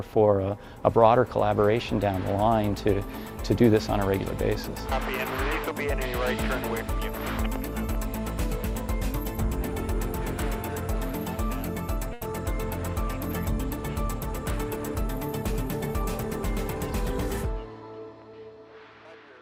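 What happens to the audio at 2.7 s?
Nothing goes wrong at 2.7 s; the audio plays through that moment intact.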